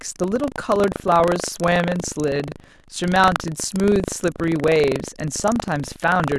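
Speech, with buffer tearing throughout. A 25 Hz rattle follows the signal. Every 40 ms period carries a small, hard-edged slice of audio about a tenth of a second old.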